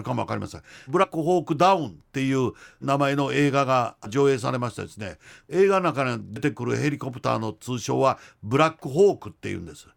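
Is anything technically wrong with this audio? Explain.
Yes: compressed frames skipped, at 1.03–1.06, 4.04–4.07 and 6.36–6.39 s. Whole 10 ms frames never got played, so the speech jumps ahead by roughly 70, 150 and 50 ms. Each join is an abrupt jump forward in the speech.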